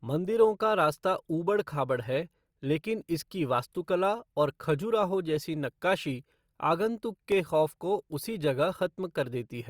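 At 7.32 s the speech drops into a block of digital silence lasting about 0.67 ms, which fits a 32-sample buffer left unfilled. The signal snaps to silence and back with no fade, so the two hard edges merge into a single brief tick.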